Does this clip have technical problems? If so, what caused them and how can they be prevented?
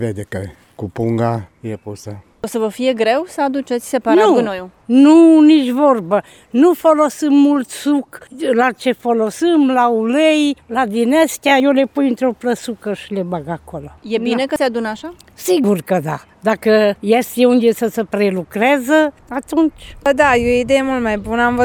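Yes. At 9.4, 11.6, 14.56 and 15.64 s the sound jumps forward, with no gap between the two sides. The likely cause is a dropped buffer (overrun): roughly 40 ms was overwritten before the program read it. Larger input buffers or higher capture-thread priority prevent this.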